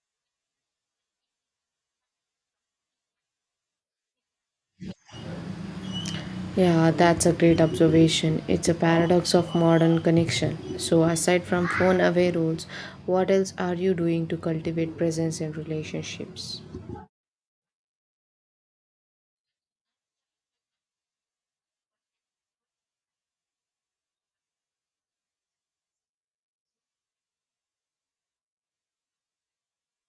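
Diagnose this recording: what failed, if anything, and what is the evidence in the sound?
Nothing in the signal chain failed that can be heard: the speech recording shows no dropouts, clicks, level jumps, band-limiting or timing disturbances at any point.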